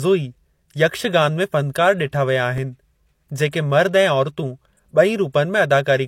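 From the first moment to the end, the speech has nothing above 16.3 kHz, and it carries the artefacts of an earlier, lower-rate encode. The file is a high-rate MP3, so this is likely low-bitrate audio saved at a high bitrate, with the audio pointing to an earlier encode at around 32 kbit/s. A genuinely poor high-rate MP3 would show its own swirling pre-echo. Here the second encode adds almost nothing. The damage is inherited from the first encode and stays the same throughout.

At 2.58 s comes a repeated buffer. Fresh audio was late, so the device replayed its previous block once more. The block is tiny, about 1.45 ms, which fits a 64-sample buffer. A repeat that short is too brief to hear as a stutter and comes across as a click or brief buzz at the hard join. What separates it from a dropout is that there is no gap of silence: the same sliver sounds twice, and the timeline slips by about a millisecond and a half.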